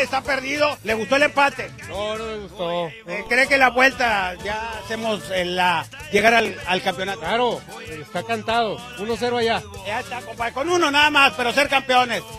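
From 6.11 to 6.57 s the processor repeatedly misses its buffer deadlines and skips short slices, and the hard-edged gaps make a gritty processor overload crackle.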